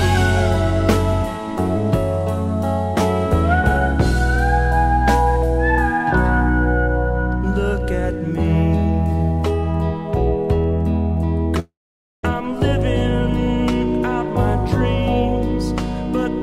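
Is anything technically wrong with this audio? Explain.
Yes. From 11.59 to 12.25 s there is a long network dropout, likely caused by incoming audio stopping for about 640 ms. The receiver stretches the last sound into a fading buzz, leaving about 510 ms of silence before playback resumes with that portion missing.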